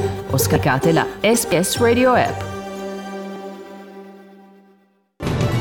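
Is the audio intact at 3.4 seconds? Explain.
No. A dropped buffer (overrun) at 3.36 s produces an abrupt jump in the sound, with no silence in between. The likely cause is a roughly 40 ms block overwritten before it was read, so the material on either side is spliced directly together.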